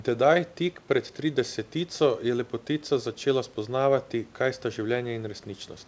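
No faults can be heard.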